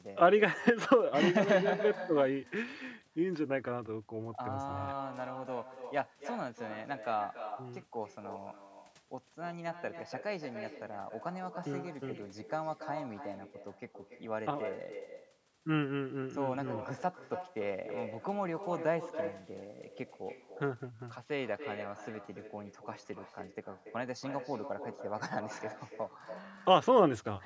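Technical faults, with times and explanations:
Throughout, echo with no canceller: every phrase of the speech is trailed, roughly 300 ms later, by a second copy about 8 dB quieter and thinner. The far end is playing the call through a loudspeaker, and its microphone picks that sound up and sends it straight back across the network. With nothing there to cancel it, the talker's own voice returns after that round trip.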